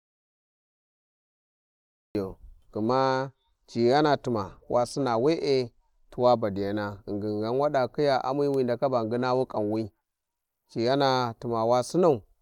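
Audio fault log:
0.00–2.15 s, audio dropout to silence: the clip opens dead silent, no room tone at all, and the speech only comes in at 2.15 s, so whatever was said before that is gone. That flat digital silence is the giveaway. The input was likely lost for a moment, whether through a disconnected device, a dropped link or a stray mute, while the recorder kept writing silence, and the dropout was already under way when the clip starts.
2.75–6.44 s and 8.88–10.96 s, Bluetooth SBC bit pool drop: twice the speech goes dull up top and picks up a gritty, grainy edge, then clears again at 6.44 s and 10.96 s. That's the SBC link backing off under congestion. It sounds like a fall from a bit pool of about 31 to about 15, roughly 105 kbps, so the top sub-bands get starved and everything else is quantised coarsely until the rate comes back up.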